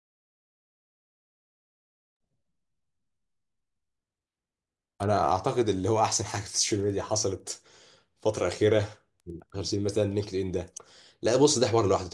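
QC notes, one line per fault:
6.6–11.1 s, resampler restarted on every block: each 100 ms block was converted without its neighbouring samples, leaving a small error at every edge, heard as ticks at 10 Hz under the speech. A spectrogram shows faint vertical lines every 100 ms, with tiny waveform steps.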